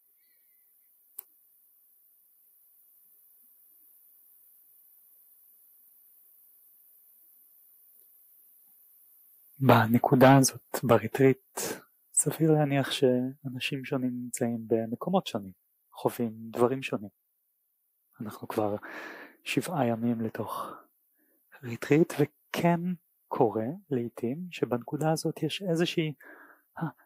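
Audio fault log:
No faults heard anywhere in this recording.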